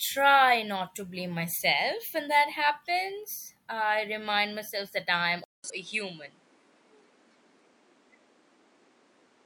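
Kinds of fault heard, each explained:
Input switched to a poorer device: At 5.44 s the speech drops out for about 200 ms. It then returns duller and narrower, with nothing above 10.3 kHz, a modest shift in level and a faint new background noise sitting well below the speech. This lasts to the end of the clip. The likely cause is the system switching its input mid-recording to a lesser microphone or a headset's call profile, which has a tighter band, its own tone and its own noise floor.
Damaged data in a compressed stream: From 5.66 to 5.70 s, just after the switch, a short glitch cuts through the speech. Here the compressed data had been corrupted, with bytes lost or overwritten, so the decoder misread those frames, lost its place in the stream and had to hunt for the next valid frame header before it could resume clean decoding.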